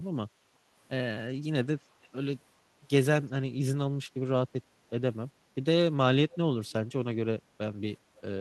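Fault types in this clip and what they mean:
Echo leak, 2.03 to 2.07 s: a brief, very faint delayed copy of the speech, arriving 374 ms late and far below the main level. The likely cause is an echo canceller on a loudspeaker end letting a scrap of its microphone pickup return down the line.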